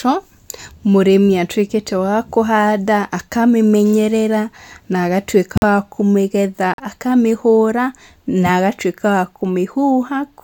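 At 5.55 to 5.64 s, after "wa kũhanda akamĩmenyerera na", and at 6.74 to 6.80 s, after "wa kũmĩgetha", corrupt frames were muted: the decoder rejected damaged frames and silence replaced them. The holes open abruptly, spanning roughly three and two frame lengths. Unlike concealment, nothing is filled in, and unlike a dropout, the timing does not shift.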